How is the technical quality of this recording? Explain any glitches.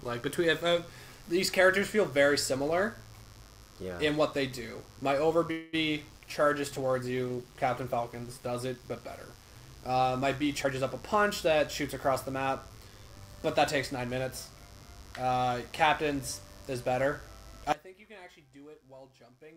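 The recording has several technical faults: a continuous buzz plus a run of network-call glitches between about 5.5 and 14 s, and a collapse in level at the very end.

Mains buzz runs through the whole clip, a steady, raspy tone built on 50 Hz with harmonics extending well up the spectrum. Sharp switching spikes, twice per mains cycle, are leaking into the signal chain, sitting roughly 30 dB below the wanted sound.

From 5.51 to 5.75 s there is a call audio freeze: the last sound is stretched into a fading buzz or hiss for about 216 ms. This is likely late packets emptying the jitter buffer. When they arrived, playback resumed where it stopped, so nothing is lost but a gap is added.

A call bitrate drop spans 6.10 to 11.10 s. The coding turns coarse, and the top end is cut off. The audio is at its worst for about 1.8 s. This fits the encoder falling from around 128 kbps to about 19 kbps after the call's bandwidth estimate dropped.

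A jitter buffer speed-up runs from 10.63 to 13.98 s, overlapping the end of the bitrate drop. Playback is hurried, about 7% faster at unchanged pitch. The receiver trimmed short pitch-period slices, around a fifth of a second in total, to bleed off excess buffered delay.

From 17.72 s to the end, one channel is inverted. The level drops by about 21 dB, and only a faint residue of the sound remains. This is likely a polarity reversal on one stereo channel, so the shared centre content cancels when the channels are summed to mono.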